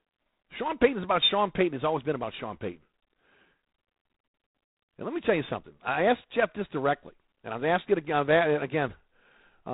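From start to end, the speech carries G.726 ADPCM damage. The codec sends only a few bits of error against a running prediction. Here the coarse steps leave a harsh, rasping hiss that rises and falls with the speech, which fits 24 kbit/s. Nothing passes above 3.9 kHz.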